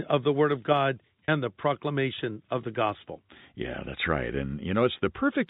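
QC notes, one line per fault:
1.25–1.28 s, packet loss with pitch repetition: the speech briefly turns into a held, buzzy tone for about 30 ms, as if one pitch cycle were stuck. The receiver bridged the missing audio, which fits three 10 ms packets, by looping the last pitch period.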